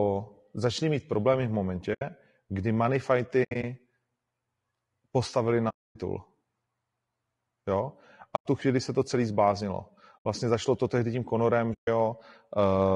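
It's a speech clip, and the whole thing has a rough, grainy edge. There's noise sitting between the harmonics and the top end sounds thin and a bit synthetic, which is most likely low-delay AAC compression, the AAC-ELD kind used on video calls, running at a low rate, somewhere around 32 kbps. Its short frames can't pin down the pitch harmonics cleanly, so the damage is plainly audible.

On top of that there's AAC frame loss with muting: six soft-edged holes where the decoder zeroed the missing frames and the overlapping windows faded the sound out and back in. The first is at 1.93–2.02 s, after "začali mít problémy v" and before "kdy money". The second, at 3.43–3.64 s, is scattered over about 200 ms, with the longest gap around 70 ms. The third, at 5.69–5.96 s, is the longest at about 260 ms. The next one, at 8.35–8.46 s, comes just before "tu chvíli se to". Another sits at 10.25 s, right after "se to celý zbláznilo". 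The last is at 11.73–11.88 s.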